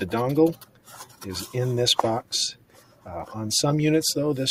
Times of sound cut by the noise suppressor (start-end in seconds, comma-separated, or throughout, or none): 0.54-1.22, 2.54-3.08